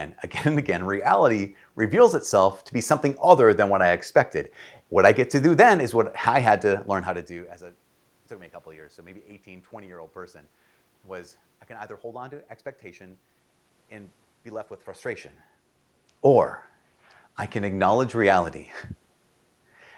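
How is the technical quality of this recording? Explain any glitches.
No technical faults turn up in this speech recording: the steady room noise underneath belongs to the acoustic space, and the level shifts at around 7 s and again near 15 s come from the talker's distance to the microphone changing, not from the system.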